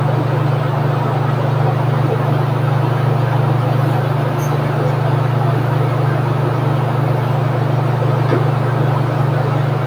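A recording of everyday sounds with no technical fault to point to. There is nothing here that needs a time or a cause attached.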